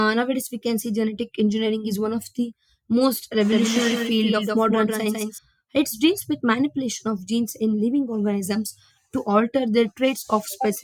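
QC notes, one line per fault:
3.52–5.38 s, doubled audio track: likely a slower second capture path mixed in. A copy trails about 150 ms late, roughly 5 dB down, and cuts off abruptly before "it deals with manipulation".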